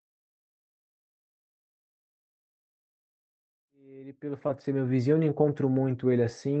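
At 4.47 to 4.51 s, during a smooth fade-in from around three and a half seconds up to 5.16 s, the speech shows a short concealed packet loss: about 20 ms of the call never reached the decoder in time. The receiver covered roughly 13 ms of that gap by extending the preceding sound and then crossfading back into the real signal, so the speech carries a brief smear or wobble there, within the 8 kHz band of the Opus call path.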